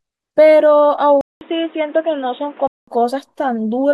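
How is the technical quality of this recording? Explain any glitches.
The recording has one clear glitch. From 1.21 to 2.88 s, after a 200 ms silence, the speech turns dull and boxy, with nothing above 3.8 kHz and new faint background noise. This is likely an input switched to a poorer device.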